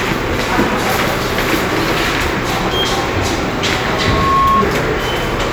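From 3.80 to 4.66 s, loudspeaker feedback squeal: the microphone re-amplifies its own loudspeaker, and a 1.1 kHz tone swells over about half a second, ending roughly 5 dB above the sound.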